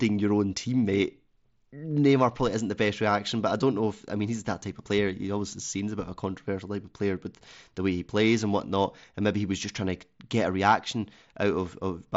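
Nothing stood out as a fault on listening to this speech clip.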